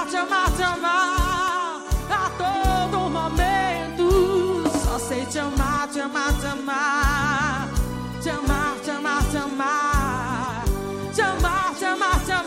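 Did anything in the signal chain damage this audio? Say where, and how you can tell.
Yes, at the codec stage: compressed frames skipped. At 0.79 s and again from 8.08 to 8.16 s the audio jumps ahead by about 20 ms. Whole compressed frames were left out, either missing from the file or refused by the decoder as damaged, so playback skips ahead by their length.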